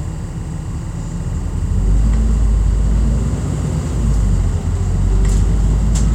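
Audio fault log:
Throughout: timecode bleed, a faint chirping warble flicking between roughly 1 kHz and 2 kHz at 24 frames per second, set apart from hum or whine by its rhythmic two-pitch switching.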